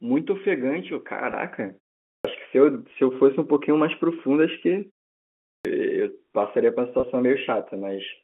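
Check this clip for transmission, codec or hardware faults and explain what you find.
Two kinds of fault are present in this speech, carried over what sounds like A-law telephone coding limited to about 200 Hz to 3.4 kHz: brief packet losses patched by pitch repetition, and clipped starts after pauses.

Packet loss with pitch repetition occurs at 1.32 s, at 2.91 s, and from 7.00 to 7.03 s. Each gap is filled by repeating the last pitch period. The first two cover about 10 ms each and sound like a tiny buzzy hold. The third spans 30 ms, fitting three lost packets, and gives a slightly longer buzzy hold.

A clipped start after a pause occurs from 2.16 to 2.25 s, after a 0.44 s silence, and from 5.55 to 5.65 s, after 0.72 s. The output path likely needed time to wake after the silence, so about 86 ms and 98 ms of each onset are lost and the sound begins abruptly.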